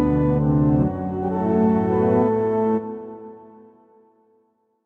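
No technical faults are audible.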